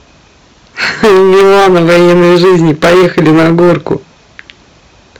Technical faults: hard clipping

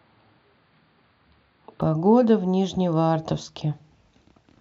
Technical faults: input switched to a poorer device

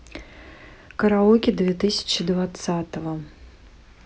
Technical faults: none

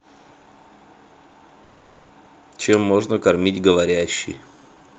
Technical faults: call audio freeze; skip ahead; jitter buffer slow-down

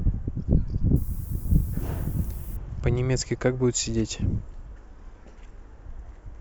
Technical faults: low bit depth with noise shaping

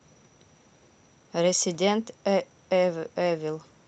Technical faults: none

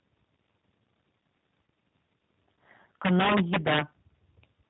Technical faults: G.729 codec; VoIP packet loss concealed by the speech codec; integer overflow

